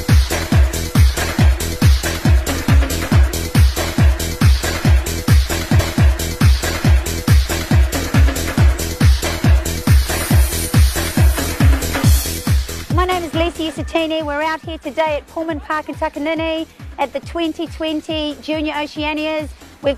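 At 5.78 s there is a small blip, and the preceding stretch of sound plays again through 7.78 s, adding about 2.0 s. This is a stream segment repeated: the player queued the same segment twice, so playback jumped back and replayed it.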